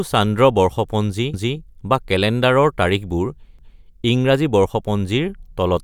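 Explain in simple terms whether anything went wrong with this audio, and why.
Twice, at about 1.34 s and again at 3.59 s, a quarter-second of the speech plays a second time, heard as a stutter. This is overlapping chunks: the audio was handled in 2-second pieces, and each new piece began 250 ms before the previous one finished.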